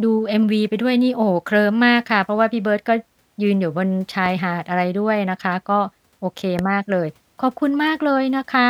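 At 4.26 s and again at 6.59 s a single loud pop lands on the speech, each lasting about 20 ms and peaking roughly 10 dB above it. The likely cause is an electrical pulse from a plug, switch or static. The speech continues underneath.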